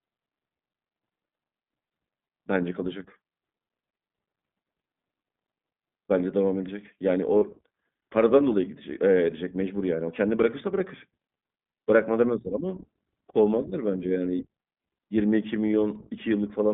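From start to finish the speech has clearly gone through the iLBC codec. It's squeezed into a line band of about 150 Hz to 3.6 kHz, so it sounds thin. The rough, slightly synthetic edge fits 20 ms frames at roughly 15.2 kbps, each frame's excitation coded on its own.

From 7.38 to 7.44 s, about 40 ms is lost, which fits two dropped iLBC frames. The decoder papers over the hole by repeating the last pitch cycle with some noise mixed in, so you hear a short, held, faintly buzzy vowel. The speech snaps back straight after.

Then from 10.40 to 10.42 s there's a single loud pop, about 10 dB above the speech, sharp and sitting on top of the audio, which carries on underneath. That's most likely a voltage step or spike from a plug, switch or driver glitch.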